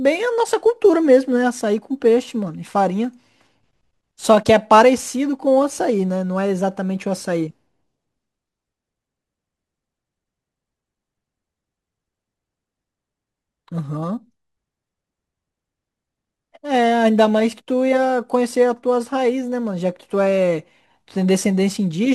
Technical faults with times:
0.00-22.14 crude rate conversion

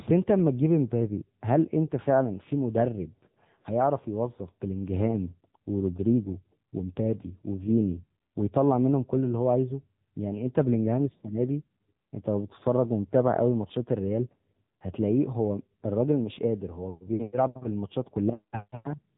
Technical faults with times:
0.00-19.17 AMR narrowband mobile codec

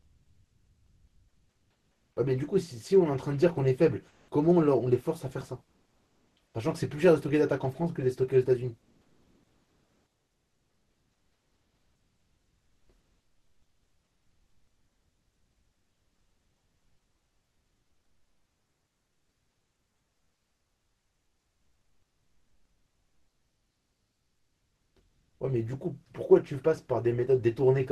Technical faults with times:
0.00-2.16 comfort noise in place of the background
4.08-4.31 comfort noise in place of the background
5.65-6.36 comfort noise in place of the background
8.81-12.89 comfort noise in place of the background
25.09-25.40 comfort noise in place of the background

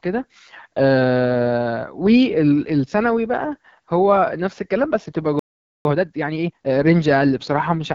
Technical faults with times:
0.00-7.95 AMR wideband (HD Voice) codec
5.39-5.85 playback stall
5.85-6.75 time-compressed catch-up

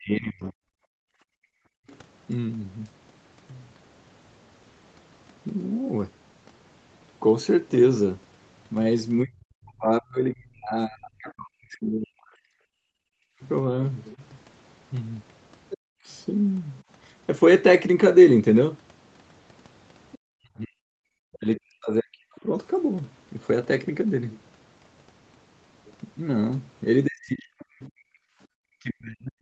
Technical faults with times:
0.00-0.59 speech suppressed in double talk
0.87-1.87 background gated by the echo canceller
1.90-1.98 other side's voice leaking through
9.24-16.08 speech suppressed in double talk
12.94-12.99 background gated by the echo canceller
14.12-16.80 other side's voice leaking through
20.12-20.16 other side's voice leaking through
20.16-22.47 speech suppressed in double talk
27.06-29.41 speech suppressed in double talk

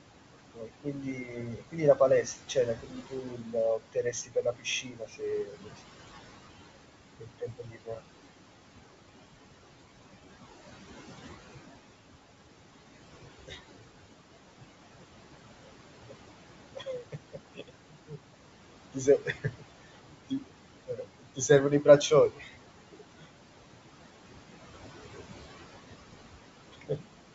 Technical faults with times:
0.00-27.34 noise suppressor artifacts
0.47-5.81 speech cut by the noise suppressor
7.20-8.02 speech cut by the noise suppressor
13.46-13.58 speech cut by the noise suppressor
15.63-16.15 speech cut by the noise suppressor
16.75-18.19 speech cut by the noise suppressor
18.93-23.32 speech cut by the noise suppressor
26.71-27.05 speech cut by the noise suppressor

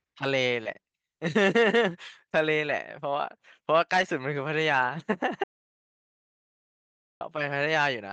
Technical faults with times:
0.63-0.67 short concealed packet loss
0.65-0.67 lost packet rebuilt from error correction
2.69 lost packet rebuilt from error correction
3.93-4.03 lost packet rebuilt from error correction
5.44-7.21 audio dropout to silence

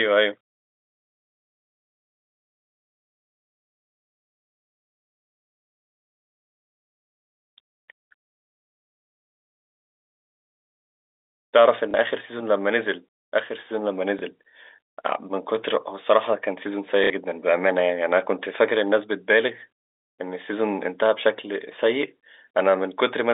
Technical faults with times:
11.91-11.94 packet loss with last packet repeated
14.19-14.22 packet loss with last packet repeated
17.04-17.10 packet loss with last packet repeated

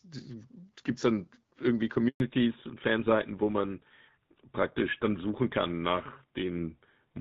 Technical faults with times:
2.08-2.20 handover gap
2.20-7.20 fallback to narrowband

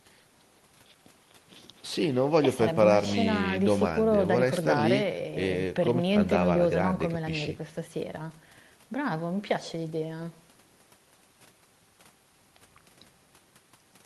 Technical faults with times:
none

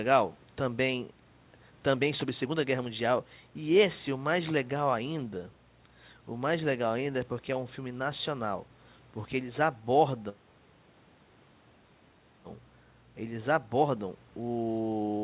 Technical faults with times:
none

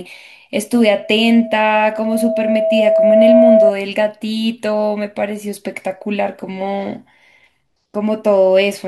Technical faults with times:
0.72-3.72 loudspeaker feedback squeal

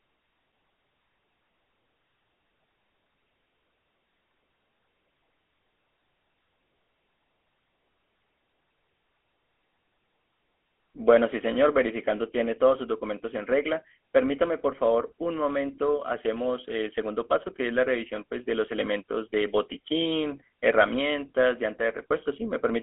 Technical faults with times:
0.00-22.83 GSM full-rate codec

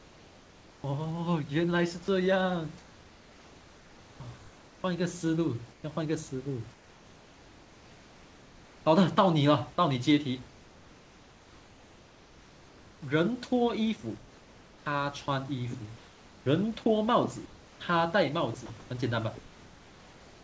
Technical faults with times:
0.00-0.84 comfort noise in place of the background
4.38-8.86 comfort noise in place of the background
10.48-20.43 comfort noise in place of the background
18.66-18.70 sound dropped by the voice detector

